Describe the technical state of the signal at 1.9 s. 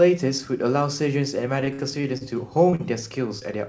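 Repeated packet loss (robotic sound) runs from 1.61 to 2.30 s: lost packets are patched by stretching the preceding sound, leaving choppy, robotic audio with brief missing pieces.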